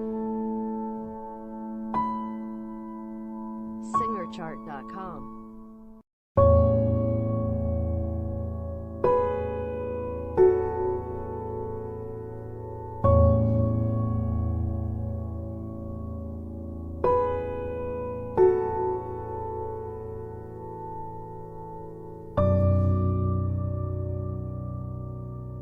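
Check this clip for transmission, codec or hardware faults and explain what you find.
No transmission, codec or hardware faults are audible here.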